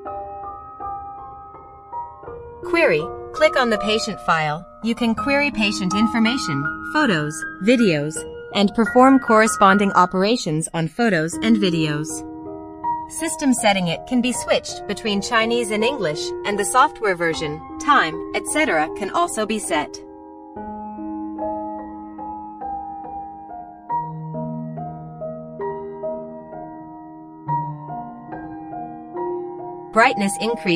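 The whole clip suffers from channels drifting apart: the two channels were captured on two devices with separate clocks, so the delay between them keeps creeping. By the end it's grown to around 7 ms, which fits a clock mismatch of a few hundred ppm. Summed to mono, the comb-filter notches glide slowly across the spectrum, giving that gradual flanging swirl.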